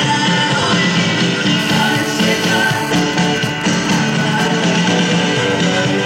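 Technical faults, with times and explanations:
1.59 to 2.92 s, GSM phone buzz: a 2G phone close by is in a call and transmitting its radio bursts about 217 times a second, and the audio circuitry is rectifying those pulses into the signal path. The result is a hard, raspy buzz at 217 Hz, rich in harmonics and unrelated to the sound itself, holding steady at about 10 dB below the signal for the whole stretch.
2.96 to 4.46 s, GSM signalling bursts: a 2G phone nearby, in a call but with its user silent, sends only short groups of bursts, still at a 217 Hz rate, which the circuitry again rectifies. Instead of a continuous buzz, this comes through as even ticks with a longer 217 Hz buzz twice a second, at a level roughly as strong as the steady buzz before it.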